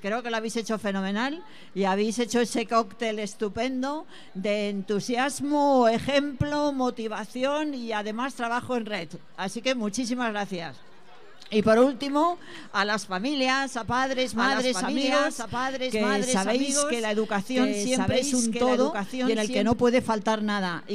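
The audio carries a doubled audio track from 13.99 s to 19.73 s. A second full-band copy runs about one and a half seconds behind the original, roughly 5 dB quieter. It repeats the material cleanly, with no decay or room colour, so it does not sound like a natural echo. The copy cuts in abruptly at 13.99 s and drops out just as sharply at 19.73 s. The likely cause is the same audio being captured again by a slower path.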